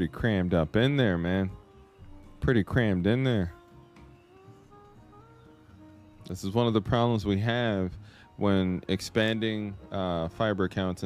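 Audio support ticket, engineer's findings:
No faults found on listening. Nothing audible points to a failing component or path.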